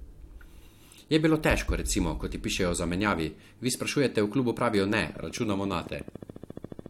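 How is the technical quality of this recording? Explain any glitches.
The recording has one clear glitch, a train of clicks near the end of the speech.

From 5.03 s to 6.87 s, just after "v klubu pravijo ne", a steady ticking of about thirty clicks runs at 14.2 per second with regular spacing, peaking about 5 dB above the speech. The likely cause is interference from nearby equipment or a faulty connection or power supply injecting near-identical pulses. On a spectrogram it shows as evenly spaced thin vertical broadband lines. On the waveform it appears as a row of sharp, matching spikes.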